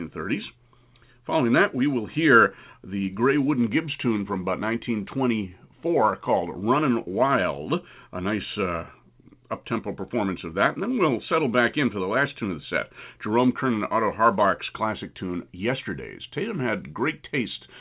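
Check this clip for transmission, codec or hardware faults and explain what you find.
No faults turn up in the speech, which carries the ordinary sound of a working narrowband call path with nothing above 4 kHz, as fits a G.711 mu-law link at 64 kbps.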